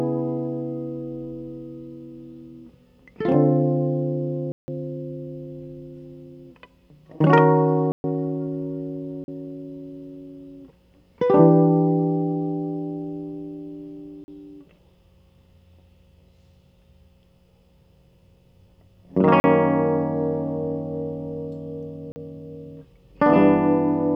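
A music clip interrupted six times by blocks of digital silence, where the signal drops to silence and returns with no fade. The gaps fall at 4.52 s (160 ms) and 7.92 s (120 ms), heard as short holes, and at 9.24, 14.24, 19.4 and 22.12 s (40 ms each), heard as briefer holes. Abrupt zero-filled dropouts like these point to the output buffer not being filled in time.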